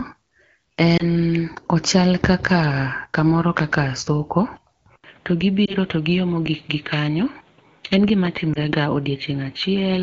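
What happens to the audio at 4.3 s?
Nothing goes wrong at 4.3 s: the speech there passes intact through the AMR wideband (HD Voice) codec at 12.65 kbit/s, with no dropout, glitch or distortion at that point.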